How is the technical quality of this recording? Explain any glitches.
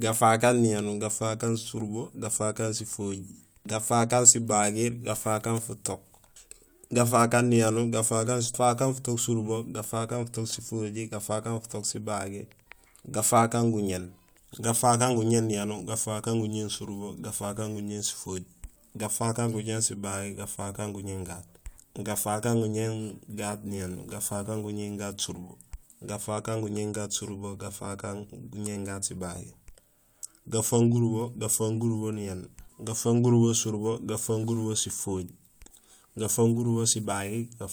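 No glitches or technical faults can be heard anywhere in the recording; the signal stays steady and intact throughout.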